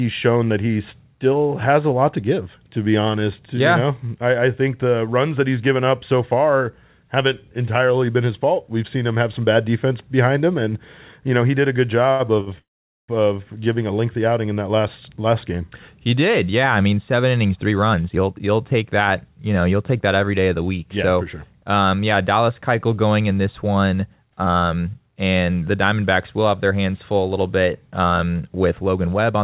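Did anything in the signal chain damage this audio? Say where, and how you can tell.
Yes. The jitter buffer in the call path ran empty twice when packets arrived late. This is a short stall from a late packet: at 12.11 s, just after "he did a good", the last sound is held for 82 ms. At 12.40 s it is held for 61 ms. Each hold has a slight buzz or dip, and nothing is lost.

From 12.58 to 13.11 s there is a call audio freeze. The sound briefly carries on, then goes silent for about 450 ms before resuming where it stopped, adding half a second of delay. This likely comes from packets held up on the network.

A jitter buffer speed-up follows once the buffer overfills: from 17.45 to 19.37 s, after "yeah I mean seven", and from 23.67 to 25.16 s, between "going in this" and "and the". Repeated pitch-period slices totalling around a fifth of a second are cut each time. The speech runs 11% and 12% fast at unchanged pitch and sounds hurried, over the G.711 path's 4 kHz band limit.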